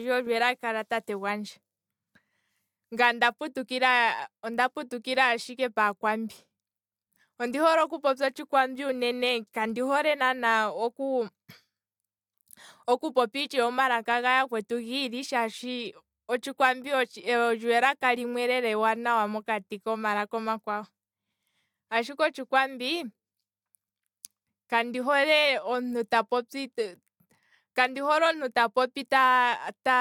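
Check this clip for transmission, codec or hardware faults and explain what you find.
The speech signal stays steady in level, continuity and tonal balance throughout, with nothing audible that points to a fault anywhere along its path.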